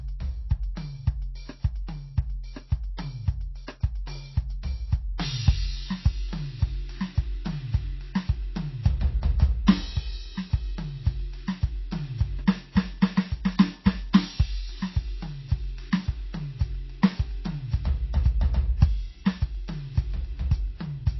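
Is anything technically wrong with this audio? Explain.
Yes. The music carries two related faults.

Throughout, there is plainly audible MP3 compression damage, likely from encoding at a very low bitrate, around 24 kbps. Nothing remains above 5.8 kHz, so the top end sounds dull and boxed in. With so few bits available, the encoder discards weaker frequency lines, and the set of discarded lines changes from frame to frame. The result is a watery, swirling texture across the sustained parts of the music.

Pre-echo occurs at 0.75 s, 2.97 s and 5.18 s. At each point, a burst of noise runs ahead of a sharp attack, lasting 16 ms, 13 ms and 17 ms respectively. The codec spreads quantisation noise across its whole transform block. When an attack lands late in a block, noise sized for the loud onset also fills the quiet moment before it. Each attack is therefore heralded by a brief hiss and sounds soft or smeared.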